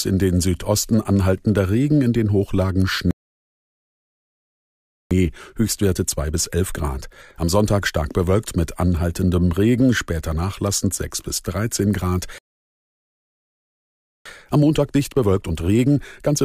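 At 3.11 s the speech just cuts out for 2.0 s, a playback stall, most likely the player starving for data or its thread getting blocked, before it resumes at 5.11 s. The same thing happens at 12.38 s, with silence until 14.26 s, roughly 1.87 s.

Each stall is followed by time-compressed catch-up. The player trims its backlog by snipping out tiny pieces and cross-fading over the gaps, so the speech comes out rushed at normal pitch. The first runs 5.11 to 8.11 s at 1.15 times speed, ending just before "bewölkt mit anhaltendem". The second runs from 14.26 s to the end at 1.25 times speed.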